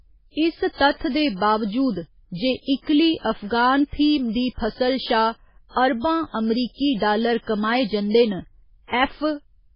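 A speech recording marked by heavy MP3 compression throughout, with the likely cause being an encoder starved of bits, consistent with a very low bitrate near 16 kbps. Nothing survives above 5.2 kHz, so the sound is dull, while weak frequency lines flicker in and out between frames, giving a watery, swirling texture and smeared consonant attacks. On a spectrogram this shows as a hard horizontal ceiling at 5.2 kHz with patchy, blocky holes beneath it.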